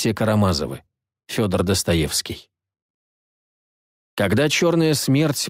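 From start to finish the level swings by around 5 dB, and the dynamics sound squashed. This gain pumping is likely caused by the input gain being set far too high for the microphone, so a fast limiter or compressor keeps clamping down and releasing.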